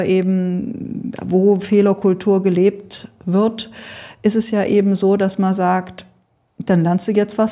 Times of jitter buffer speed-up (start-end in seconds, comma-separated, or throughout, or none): none